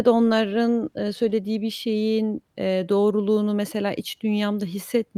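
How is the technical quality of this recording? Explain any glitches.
No glitches can be heard.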